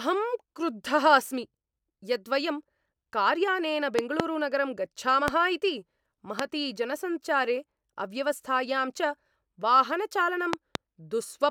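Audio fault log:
3.99–4.22 s, 5.28–5.30 s, 6.39–6.42 s and 10.53–10.77 s: loud pop. Sharp pulses stand far above the speech, with two quick pops in the first and last spans and single ones between. The speech continues underneath. These are likely voltage spikes from a switch, plug or static discharge.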